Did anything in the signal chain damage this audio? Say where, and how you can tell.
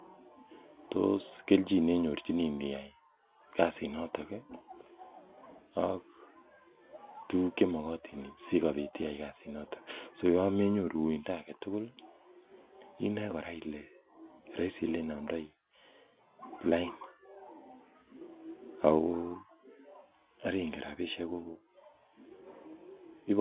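No, nothing in the chain damaged this speech; it carries ordinary G.711 mu-law telephone coding at 8,000 samples a second, with the band topping out at 4 kHz and the faint quantisation noise riding about 38 dB under the signal that this format produces by design.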